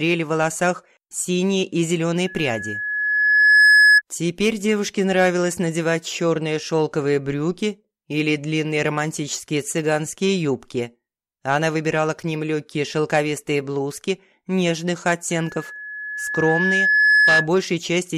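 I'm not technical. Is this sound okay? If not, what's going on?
No. From 2.27 to 4.02 s and from 15.31 to 17.49 s there is loudspeaker feedback squeal. A microphone picks up its own speaker, so one high pitch near 1.7 kHz swells over a second or two. Unlike a steady whistle, it grows by itself.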